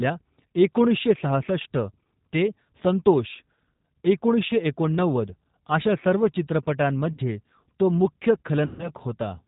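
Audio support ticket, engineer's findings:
G.729 codec damage, whole clip: band-limited, slightly rough, synthetic-sounding speech. Spectrogram shows a hard ceiling near 4 kHz with nothing above, and smeared, grainy formants. Encoder rebuilding speech from a vocal-tract filter, pitch predictor and sparse pulses. The sound fits an 8 kbit/s G.729A-type link.

VoIP packet loss concealed by the speech codec, 7.13–7.20 s: 50 ms of audio stretched into a buzzy, fading tone. Decoder repeats its last pitch and filter with falling gain, which fits about five lost 10 ms frames. Waveform shows repetitive, decaying periods.

Same fault, 8.66–8.91 s, right after "तो मुख्य": longer 130 ms gap, buzz decaying into coloured noise. Spectrogram shows frozen harmonics fading out, then weak, distorted speech just after 8.91 s while the decoder state recovers.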